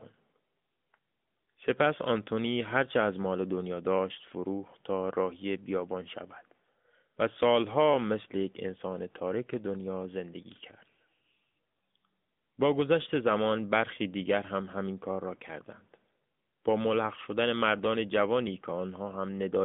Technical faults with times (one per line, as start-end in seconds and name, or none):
0.00-19.65 AMR narrowband mobile codec